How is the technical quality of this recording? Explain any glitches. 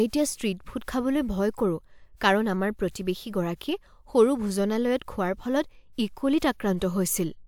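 No glitches to report: nothing in the speech recording shows an audible technical fault.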